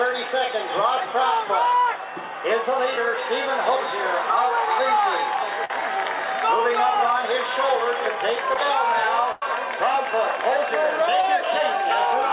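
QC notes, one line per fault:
2.96, 8.54 and 11.21–11.24 s: short concealed packet loss. About 10, 10 and 20 ms never arrived. The receiver extended the preceding sound, leaving brief smears or wobbles.
5.65–5.70 and 9.32–9.46 s: burst of packet loss. About 40 and 90 ms were lost. The concealment held and faded the last sound, then jumped ahead.
throughout: WebRTC call path. Nothing above 4 kHz, as the narrowband call path fits G.711.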